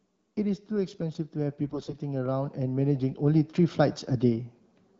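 From 0.67 s to 4.52 s, automatic gain rising sets in. The gain control judged the input too quiet and turned itself up slowly. The level climbs by about 7 dB over nearly four seconds. Speech and background noise swell together, so the room seems to creep closer. The rise is gradual, with no step. The light coding of the AMR wideband (HD Voice) path stays faint beneath it.

From 1.64 s to 1.98 s, AMR bit errors strike. The radio link was weak, and around one bit in twenty of the weakly protected bits arrived flipped. The checksum over the key bits still passed, so the frames were decoded, not discarded. The 0.34 s burst fits about 17 codec frames. The speech keeps its rough pitch and level but turns hoarse, scratchy and gargly, then clears.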